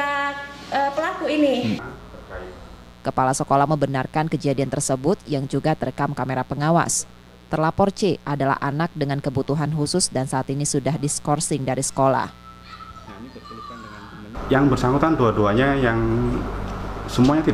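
A steady, raspy mains buzz runs throughout, sitting well below the sound: switching spikes twice per 60 Hz cycle spray harmonics up to several kHz.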